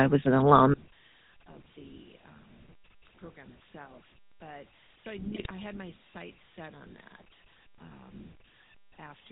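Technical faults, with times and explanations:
Throughout: GSM full-rate codec. The speech has passed through the original GSM full-rate coder, which fits a bitrate of about 13 kbps. The coder represents the vocal tract with a filter and excites it with a sparse, regularly spaced pulse train that keeps only a third of the excitation samples, and nothing above 4 kHz survives. The damage is plainly audible: a buzzy, gravelly roughness on the voice and a dull, band-limited top end.
0.74 to 9.32 s: one channel inverted. From 0.74 s to the end the level drops by about 33 dB and the voice is reduced to a faint remnant. The likely cause is one stereo channel with reversed polarity, heard as a mono sum. Whatever the two channels share, including the centred voice and its low end, cancels almost completely, and only the small difference between them remains.
5.33 to 5.51 s: GSM bit errors. For about 0.19 s the speech breaks into squawks, pops and gargling. 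The pattern fits corrupted bits reaching the speech decoder across roughly ten consecutive 20 ms frames, with a bit error rate of about 1.7 percent. When the decoder receives wrong filter, pitch or gain parameters, it produces a distorted spectrum or sudden level spikes frame by frame. That gives the burst its erratic, non-speech character.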